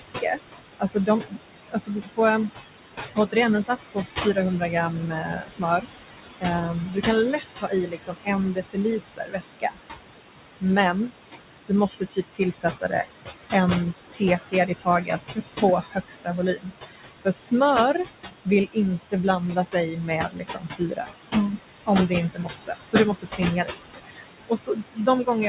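From the start the background sinks between phrases and swells back under them. These are noise suppressor artifacts: the suppressor pulls the room noise, which sits only about 7 dB below the speech, down by about 19 dB frame by frame.

Speech itself gets swallowed by the noise suppressor across five stretches: 0 to 2.5 s, 3.08 to 9.78 s, 10.6 to 11.11 s, 11.67 to 21.07 s, and from 21.86 s to the end. Soft consonants and word endings turn faint, dropping by about 17 to 21 dB. The suppressor mistakes them for noise, clipping roughly 0.7 s in the first stretch, a few seconds each in the longer middle ones, and only a brief moment around 11 s. Everything is band-limited to 4 kHz, which fits a 64 kbps G.711 A-law call codec.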